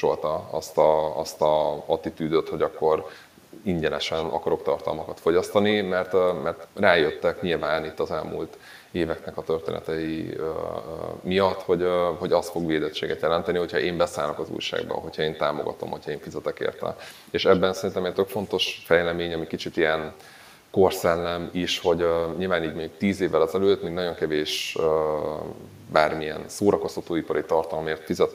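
Every phrase of the speech is trailed, roughly 150 ms later and throughout, by a quieter, thinner copy about 17 dB down. That is echo with no canceller: the far end's loudspeaker feeds its microphone, returning the talker's voice uncancelled after the network round trip.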